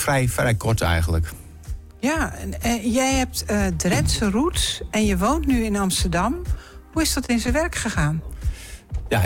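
At 7.26 s a short stall from a late packet holds the sound for about 29 ms, through 7.31 s. The packet missed its playout time, the jitter buffer ran dry, and the receiver stretched the last sound until it arrived, then resumed from the same point, so nothing is lost and playback ends up 29 ms later. It sounds like a brief hitch with a faint buzz. A spectrogram shows a frozen band of frozen, smeared harmonics, and the waveform shows a repeating, slightly dipped stretch.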